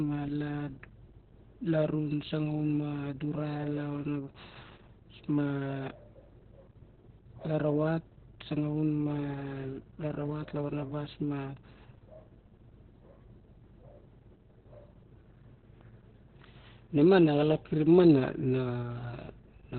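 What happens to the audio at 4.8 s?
At 4.8 s the speech is under Opus voice compression, which runs through the whole clip rather than starting there. The sound points to the SILK linear-prediction coder at a very low rate, around 8 kbps, narrowed to a narrowband channel. Nothing is heard above about 4.3 kHz, and the excitation is coded coarsely. Heavy damage results: speech sounds muffled, hoarse and slightly robotic, with the breathy detail of sibilants gone.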